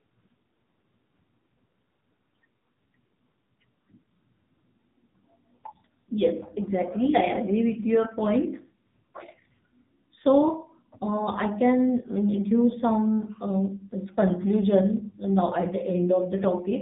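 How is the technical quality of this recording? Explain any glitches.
The technical quality is poor throughout. The speech sounds narrow, buzzy and synthetic from start to finish, with nothing above about 3.8 kHz. This is AMR narrowband mobile codec damage: the voice is rebuilt from a vocal-tract model and sparse pulses at 8 kHz sampling, and the heavy artefacts point to a low rate of around 6.7 kbps.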